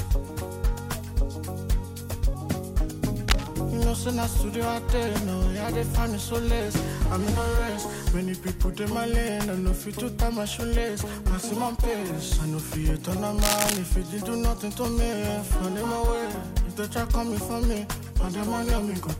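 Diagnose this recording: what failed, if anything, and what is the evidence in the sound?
Cable scratch noise in the analogue wiring. There's a burst of gritty, uneven scratching from 3.28 to 3.48 s, a bit below the signal, then a longer one from 13.42 to 13.78 s at about the signal's level. Likely a worn connector or cable shifting, its contact resistance jumping around.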